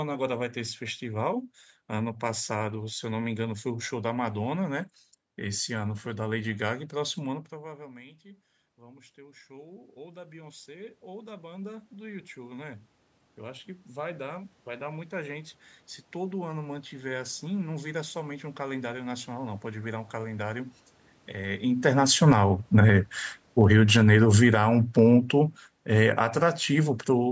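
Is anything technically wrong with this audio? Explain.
Yes. The level control of the recording chain is audibly pumping.

Automatic gain rising occurs from 7.5 to 15.67 s. Around 7 s the talker moves away, and the input drops by about 24 dB. The control slowly adds about 17 dB to compensate. Voice and room noise swell together. Two shorter rises follow, about 6 dB from 22.39 to 23.23 s and about 4 dB from 26.31 to 26.74 s.

Automatic gain falling runs from 22.02 to 27.27 s. Near 21.5 s the talker moves. The control lowers gain by about 11 dB. The voice sinks along with its background.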